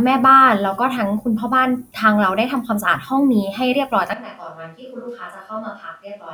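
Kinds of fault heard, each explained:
Switch to a distant microphone: from 4.1 s to the end the speech abruptly turns roomy and hollow, thinner in bass and about 10 dB quieter, with room noise roughly 30 dB down, likely because the close microphone dropped out. A plain gain drop would leave the tone unchanged.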